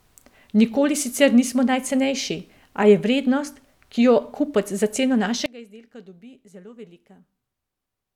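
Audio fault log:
5.46–8.15 s one channel inverted: speech drops about 22 dB to a faint copy; likely one channel's polarity flipped, cancelling the centre.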